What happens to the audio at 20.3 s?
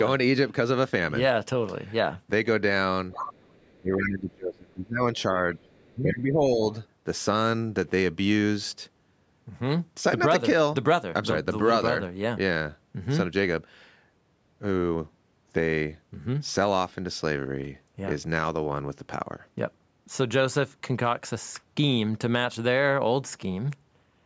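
Nothing goes wrong at 20.3 s: the speech runs on intact through that moment, carrying only the ordinary band limit of call microphone processing, with nothing above 8 kHz.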